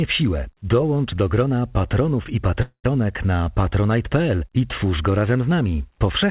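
Packets on the call path were likely held up long enough for the jitter buffer to run dry, producing a call audio freeze from 2.62 to 2.86 s, right after "do grona patronów i". The receiver stretched the last sound into a fading buzz before the final 0.1 s dropped to silence. When audio resumes, nothing is lost, but everything after arrives about 0.22 s late. The sound stays narrowband throughout, with nothing above 4 kHz.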